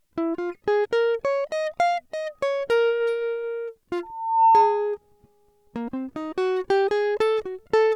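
Loudspeaker feedback squeal from 4.03 to 4.98 s: the microphone re-amplifies its own speaker output, so a 902 Hz tone swells over about 0.4 seconds, ending roughly 10 dB above the music.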